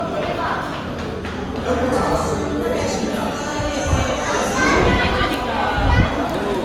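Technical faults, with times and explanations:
Throughout, generation loss: swirly, hollow smearing and blurred attacks, more than a single encode explains, likely from about five passes through Opus near 48 kbit/s.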